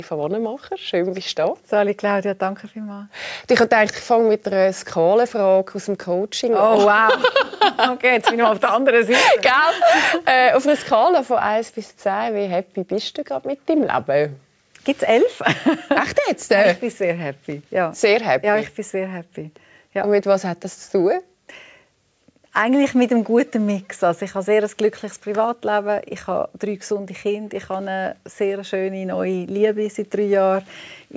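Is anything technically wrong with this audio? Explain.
No, nothing is technically wrong.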